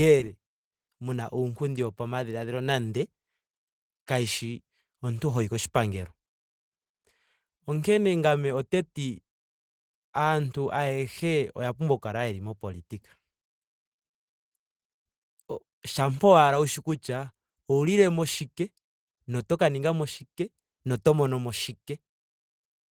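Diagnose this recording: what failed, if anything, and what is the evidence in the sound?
Opus compression throughout, at the codec stage: the speech sounds plainly hoarse and grainy up to about 20 kHz, likely Opus hybrid mode at a rate fitting 16 kb/s.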